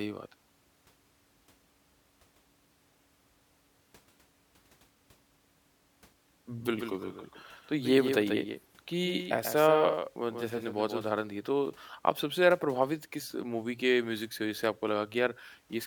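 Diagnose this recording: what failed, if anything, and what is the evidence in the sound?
Doubled audio track, 6.6 to 11.0 s: an abrupt full-band copy trails roughly 150 ms, about 5 dB down, doubling spectrogram onsets. Likely a slower second capture path.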